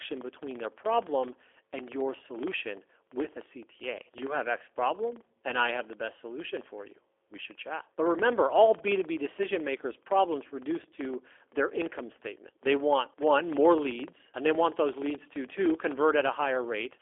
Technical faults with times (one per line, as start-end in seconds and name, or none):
0.00-17.01 filter restarted on every block
0.00-17.01 G.729 codec